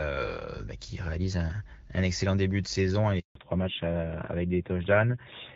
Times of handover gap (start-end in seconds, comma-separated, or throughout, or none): 3.19-3.35